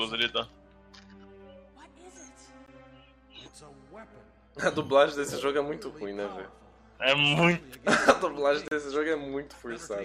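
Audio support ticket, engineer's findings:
Gap between stream segments at 2.66 s (about 16 ms) and 8.68 to 8.72 s (35 ms). Hard-edged silent holes about 6 s apart, matching a 6 s segment length. Packager/segmenter timestamps: consecutive segments don't abut, so the player pads the hole with silence. No content lost, just time inserted. Check segment boundary timestamps and audio priming/padding alignment.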